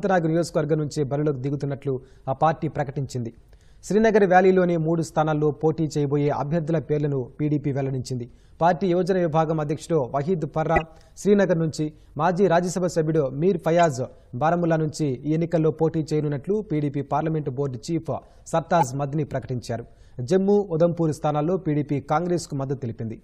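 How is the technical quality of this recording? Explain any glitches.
The recording has four short glitches, each a corrupt frame decoded. They occur at 6.27 to 6.32 s, 10.76 to 10.82 s, 13.79 s and 18.79 to 18.84 s. In each case, flipped bits inside a few compressed frames were decoded anyway, so misread gains and codes put energy at the wrong frequencies. The result is a brief chirpy blip or noise burst. The one at 10.76 s is loudest, peaking near about −5 dBFS, and the one at 6.27 s is faint, around −30 dBFS. Unlike a dropout, which leaves a gap, these put wrong sound in place of the audio.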